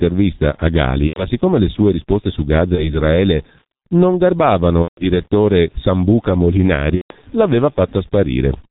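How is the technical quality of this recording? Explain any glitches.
The technical quality is poor: the whole recording passes through a very low-rate telephony codec, and four separate dropouts have been patched over by the decoder.

The G.723.1 codec damage runs throughout. The speech is carried in 30 ms frames at a rate that fits roughly 6.3 kbit/s, with nothing kept above 4 kHz and a voice model that adapts sluggishly, so the speech comes across heavily muffled and hoarse, with smeared consonants. On a spectrogram, energy stops abruptly at 4 kHz and formant detail looks blocky and coarse.

VoIP packet loss concealed by the speech codec occurs at 1.07–1.26 s, 2.75–2.99 s, 4.82–5.06 s and 6.95–7.12 s. Each gap points to lost audio of about 90 ms, 30 ms, 150 ms and 150 ms respectively. The decoder filled each gap by repeating its last pitch and filter with shrinking gain, so the speech smears into a buzzy tone or coloured noise that fades, and stays weak briefly afterwards. 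A spectrogram shows flat, repeated frames, and the waveform shows a decaying envelope.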